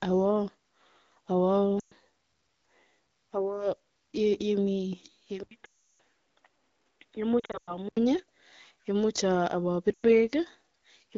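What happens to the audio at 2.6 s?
Nothing goes wrong at 2.6 s: the speech carries on intact through that moment, with only the light coloring of the AMR wideband (HD Voice) codec running at 12.65 kbit/s.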